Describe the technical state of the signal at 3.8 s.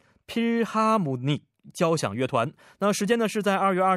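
At 3.8 s the speech plays through cleanly, with no dropout, distortion, glitch or other technical fault at that moment.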